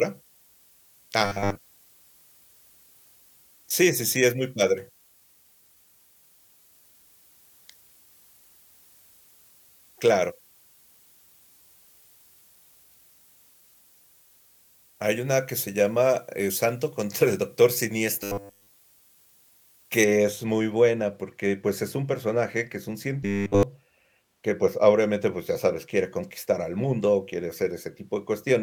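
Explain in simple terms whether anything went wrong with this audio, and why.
Two things went wrong. For the first 20 seconds or so, from the start to about 20.04 s, the speech sounds thin, bright and hissy on the s sounds. That's pre-emphasis left on: the treble got boosted for recording or broadcast, and the matching cut that should undo it on playback never happened. The shape of the boost fits the standard FM curve.

The second problem is a robotic sound from repeated short buffers, in three short bursts: 1.25 to 1.57 s, 18.23 to 18.67 s and 23.23 to 23.63 s. In each, the speech turns into a stiff, metallic 100 Hz buzz that still loosely follows the talking. It's likely that fresh audio was arriving too late, so the playback kept looping the last 10 ms snippet. In the first burst that covers most of the stretch, and in the other two all of it.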